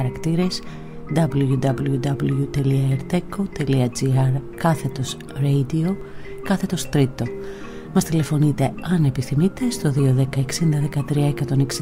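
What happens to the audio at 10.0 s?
At 9.99 s there is an overlap between stream segments. The audio arrives in 1.0 s segments, and at this boundary the time stamps of two neighbouring segments claim the same stretch of time. The player trims the duplicated span, but the material there was never actually repeated, so about 13 ms of real sound is lost. The waveform jumps across the gap, producing a brief click or tiny skip.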